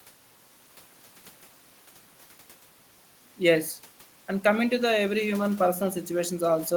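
No technical faults can be heard in the speech, and the faint room noise about 31 dB below it is simply part of the space where the microphone was.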